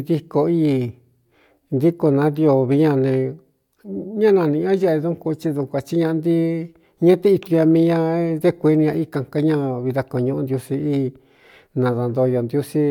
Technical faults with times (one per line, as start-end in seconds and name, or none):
none